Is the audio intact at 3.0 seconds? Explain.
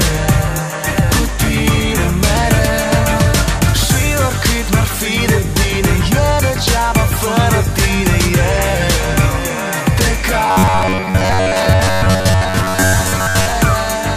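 Yes, at 3.0 seconds the audio is intact, with no dropout, click, distortion or other fault to be heard at that moment.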